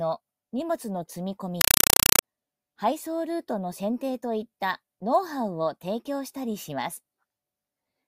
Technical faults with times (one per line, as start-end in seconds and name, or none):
1.61-2.23 compressed stream played as audio